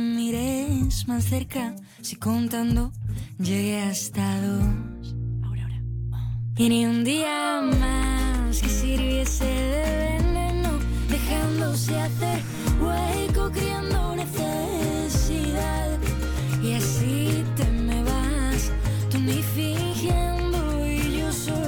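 Nothing in this audio stands out as a technical problem, so there's really nothing to flag here.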